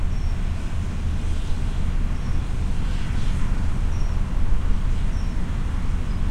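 A recording of sounds with sample clock jitter throughout: the converter's timing wanders by under a microsecond, so each sample lands early or late. The error, some 60 dB below the signal, adds a hiss-like roughness that follows loud, steep content and disappears in silence.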